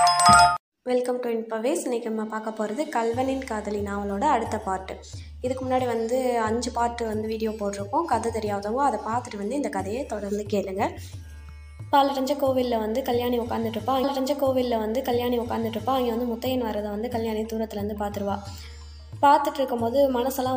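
At 14.03 s a stream segment repeated. The player queued the same chunk twice, so about 2.0 s of audio replays after a small blip at the jump back.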